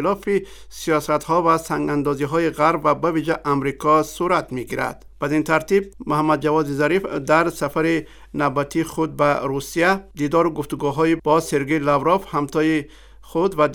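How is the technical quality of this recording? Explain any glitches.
No glitches or technical faults can be heard anywhere in the recording.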